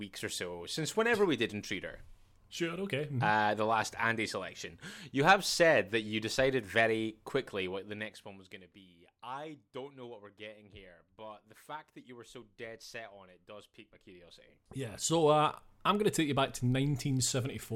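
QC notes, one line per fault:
13.95–15.30 s, zipper noise. Just after "it does pique my", the speech level swings by roughly 15 dB, and a fine ticking rides on the voice until "uh I'm going to". The gain moves in discrete steps, around a hundred per second, with no smoothing between them. Each jump leaves a tiny click in the waveform. Heard in quick succession, those clicks merge into a zipping buzz.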